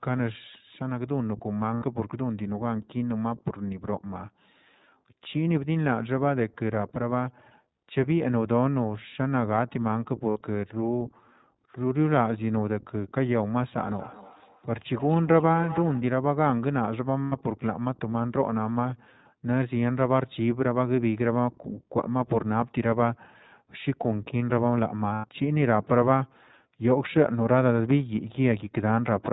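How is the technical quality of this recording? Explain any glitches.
The recording has audible technical problems: narrowband, slightly synthetic speech throughout, four brief dropouts, and a ringing echo in the middle.

Throughout: the speech sounds muffled and a little rough and synthetic, with nothing above 4 kHz. This comes from the iLBC codec, which fits its 15.2 kbps mode with 20 ms frames.

At 1.74–1.84 s, 10.30–10.38 s, 17.25–17.34 s and 25.14–25.25 s: short held, buzzy vowel sounds lasting 60 to 100 ms. These are lost iLBC frames, consistent with three to five missing 20 ms frames. The decoder repeated the last pitch cycle mixed with noise, then recovered almost immediately.

From 13.75 to 16.13 s: each word returns thinner and ringing, at about a fifth of a second, peaking about 13 dB below the speech. This is feedback echo between two devices. One device replays the other's microphone signal, and that microphone picks it up again, beyond the reach of either echo canceller.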